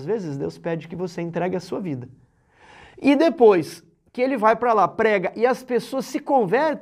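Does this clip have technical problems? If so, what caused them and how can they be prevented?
No, nothing stood out as a technical problem on listening.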